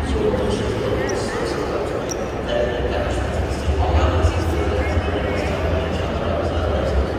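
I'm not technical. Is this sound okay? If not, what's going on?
Yes, it's fine: nothing in this recording sounds wrong, so you can relax about it.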